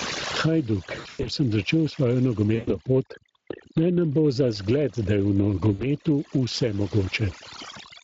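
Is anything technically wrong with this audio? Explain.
Yes. The speech has several technical faults, some present throughout and some at specific moments.

Overdone noise removal runs through the whole clip. A noise reducer set far too aggressively shuts off any frequency band near its noise estimate, taking the quieter parts of the voice with it. The background falls to near silence broken by twinkling specks. On a spectrogram the gaps look black with scattered isolated dots, and speech harmonics appear ragged and hollowed out.

Gain pumping is also present throughout, with a gain swing of around 25 dB. The likely cause is input gain set far too high, with a fast limiter or compressor hauling it down on every peak. Loud and soft passages sit unnaturally close in level, and the speech sounds squashed. On the waveform, peaks are flattened into a dense block, and the noise floor rises visibly between phrases.

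The Speex codec damage is plainly audible throughout. This CELP speech codec spends few bits on the excitation signal, so the speech comes out noisy and hoarse. The degree of damage fits a middling setting of roughly 20 kbps. A spectrogram would show harmonics smeared into grainy texture, and any band above 8 kHz would look like uniform, noise-like fill rather than real detail.

VoIP packet loss concealed by the speech codec occurs three times: 0.99 to 1.29 s, 2.55 to 2.76 s, and 5.73 to 5.86 s. In each gap the decoder extrapolates from its last pitch and filter while lowering the gain, so the sound stretches into a fading buzzy tone or coloured noise. The first event is the longest, with dropouts scattered across about 240 ms and one continuous stretch of about 100 ms. The spectrogram would show frozen, repeating harmonic bands, and the voice stays weak for a short while after each gap.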